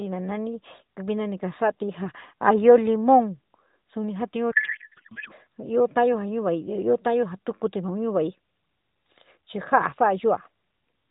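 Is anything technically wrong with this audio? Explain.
Yes. A codec payload misread runs from 4.52 to 5.33 s. The decoder takes in frames that look valid, but it reads their bits from the wrong positions, which fits octet-aligned AMR packing being parsed as bandwidth-efficient. For those 0.8 s the speech gives way to garbled noise and warble that barely follows it, until the packing matches again. Around it, the narrowband AMR codec leaves everything above 4 kHz missing and adds a light coding texture.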